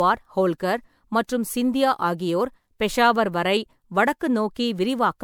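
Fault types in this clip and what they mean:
generation loss: the speech was likely re-encoded as MP3 about four times, each pass re-quantising, so it sounds swirly, hollow and smeared with blurred attacks.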